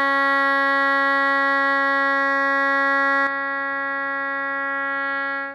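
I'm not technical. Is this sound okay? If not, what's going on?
No. There's an input switched to a poorer device from 3.27 s to the end. The music suddenly loses its brightness, with nothing above 5.1 kHz, so it sounds duller and boxier. It also gets a bit quieter, and a faint new background noise appears underneath. There's no gap at the switch; the change is instant. What this most likely means is that the recording jumped to a lower-quality microphone or headset partway through.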